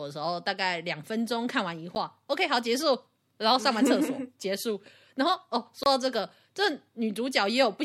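A speech recording with two blocks of digital silence: a 10 ms dropout at 1.95 s that lands as a tick, and a longer 27 ms hole from 5.83 to 5.86 s. Both cut hard to silence and back, which points to an output buffer not being filled in time.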